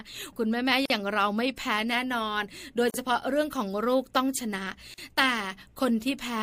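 Pieces of this speech encoded separately were joined without trimming encoder delay and end padding, so a gap at a join of encoded pieces opens every 2 s: about 45 ms at 0.86 s, then 40 ms at 2.90 s and 4.94 s. Each is a brief silence with smeared edges, after which the sound resumes where it stopped.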